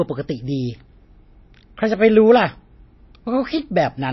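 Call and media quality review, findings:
MP3 compression, likely at a low bitrate near 26 kbps: treble cut off above 5.8 kHz throughout; plainly audible watery swirl, dulled s sounds, smeared speech onsets.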